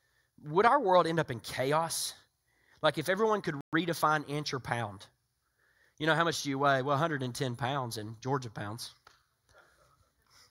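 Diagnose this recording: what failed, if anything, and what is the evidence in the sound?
A playback stall cuts into the speech at 3.61 s, just after "if everyone could". The output drops to silence for 120 ms. Sound returns at 3.73 s with "inch or pound". The likely cause is a starved player buffer or a blocked playback thread.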